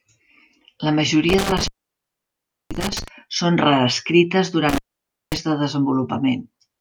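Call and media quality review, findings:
Intermittent contact, loose cable or plug: circuit opens briefly, speech drops out with crackle at both edges, faint hiss during the gap. 1.29–3.08 s (open about 1.03 s) and 4.69–5.37 s (open about 0.54 s).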